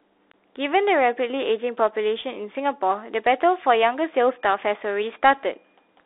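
From start to finish, the speech carries the sound of a Bluetooth CVSD headset codec. Everything sits in a narrow line band of roughly 300 Hz to 3.7 kHz, so the lows are thin and the top is gone. The codec tracks the waveform one bit at a time, only nudging up or down. Fast, loud high sounds outrun it and smear. S sounds turn scratchy, and a grainy hiss runs under the speech.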